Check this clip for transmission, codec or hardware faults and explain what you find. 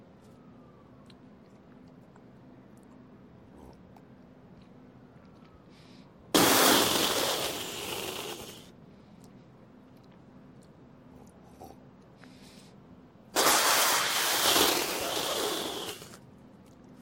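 One fault is audible: damaged data in a compressed stream, from 14.82 to 14.85 s. For about 34 ms, corrupted bytes make the decoder misread frames, lose sync and hunt for the next frame header. The result is a short glitch.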